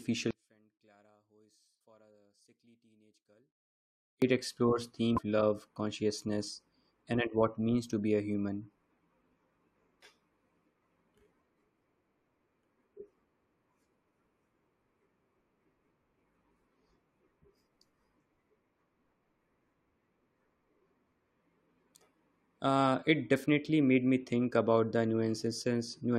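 From 0.31 to 4.22 s, the speech nearly disappears. It drops by about 35 dB, leaving only a faint trace. This is the sound of one channel inverted. One stereo channel likely has reversed polarity. When the two channels are summed to mono, everything they share cancels. The centred speech goes with it. Only the small difference between the channels survives. At 4.22 s the full level returns.

At 1.8 s, inside that quiet stretch, a brief blip cuts through. A second one follows from 5.17 to 5.19 s. Both are damaged data in a compressed stream. Some bytes in the encoded file were wrong at those points. The decoder misread the frames, lost its place and hunted for the next valid frame header. Each error comes out as a short glitch.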